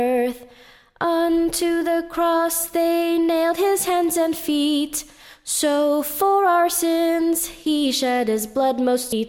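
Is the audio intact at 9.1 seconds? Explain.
No. At 9.12 s compressed frames are skipped: about 0.4 s of audio is gone, likely around fifteen 26.1 ms frames, so the audio jumps ahead at that point.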